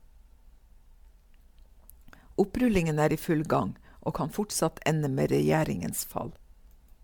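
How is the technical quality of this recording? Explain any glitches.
The speech has a consistent degradation rather than isolated glitches: generation loss runs through the whole clip.

From start to finish the sound is swirly, smeared and hollow, with consonant attacks blurred. This is likely from repeated lossy re-encoding, with the character pointing to MP3 at around 128 kbit/s applied several times, perhaps about five. Each pass requantises on a shifted frame grid, so noise and gaps accumulate. A spectrogram would show patchy holes, a hard ceiling near 19.9 kHz, and onsets smeared in time. The waveform would show softened transients.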